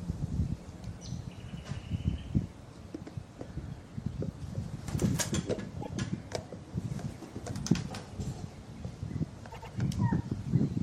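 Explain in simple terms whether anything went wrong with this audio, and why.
Two stutters, both from repeated frames. At 5.81 s a 157 ms piece of sound plays once more. At 9.50 s a 104.5 ms piece plays twice more. Chunks of the stored audio were saved or sent again, so the player repeats them.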